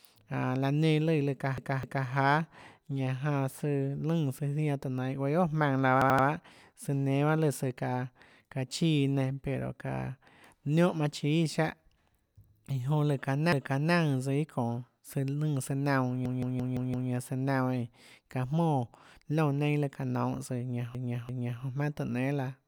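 Repeated frames stutter the speech at 1.58, 6.02, 13.52, 16.26 and 20.95 s. Blocks of 85 to 430 ms replay, lengthening the audio.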